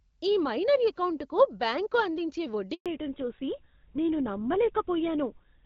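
At 2.74 s, right after "మైనర్ ఎకౌంటుకు బ్యాంకు అందించే", a handover gap cuts the speech for 120 ms as the call switches networks. Unlike a packet-loss glitch, nothing is concealed or smeared: the sound fades quickly to true silence and resumes at 2.86 s.

From 2.86 s to the end comes a fallback to narrowband. Everything above 4 kHz disappears at once, so the speech turns duller and rougher than the lightly coded HD Voice before it. The abrupt, permanent change of character points to a switch to an older codec such as GSM full rate, rather than a rate drop within AMR-WB.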